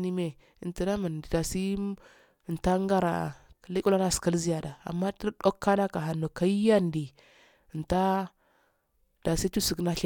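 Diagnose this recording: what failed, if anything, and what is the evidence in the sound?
Nothing failed in this recording. No stage of the chain, from wiring and conversion through processing, transport and playback, leaves any audible trace of a fault in the speech.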